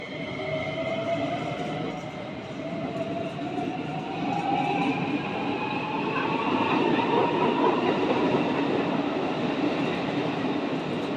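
No technical faults are audible anywhere in the audio.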